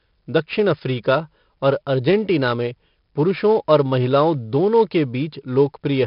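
Speech with 4-bit ADPCM compression throughout: heavy gritty hiss rides every loud syllable, attacks distort, and nothing above 5.3 kHz survives, which fits a low sample rate.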